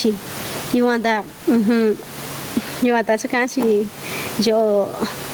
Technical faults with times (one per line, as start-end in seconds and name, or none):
0.00-5.33 gain pumping